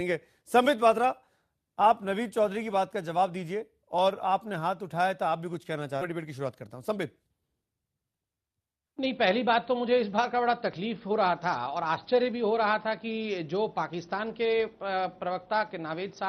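Right around 6.01 s the audio does a skip ahead: something like 0.4 s of sound just isn't there, and the two sides of the cut are butted together with no fill, so it lurches forward rather than pausing. That's what you get when a chunk gets thrown away, in transit or by an overfull jitter buffer, because newer audio was already queued behind it. It closes about 0.4 s of latency in one go. Straight after, from 6.11 s to 7.71 s, there's a jitter buffer speed-up. The receiver is still sitting on more buffered audio than it wants, so it keeps snipping out tiny pitch-period-sized slices, around 150 ms in total. Playback runs at roughly 109% speed through that stretch, with the pitch unchanged, and it comes across as noticeably rushed before settling back.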